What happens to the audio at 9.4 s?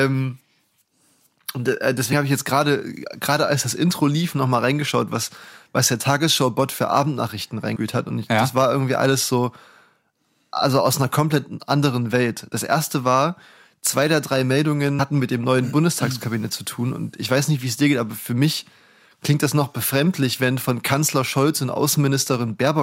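Nothing goes wrong at 9.4 s: the speech carries on intact through that moment, with no dropout, click, distortion or other fault to be heard.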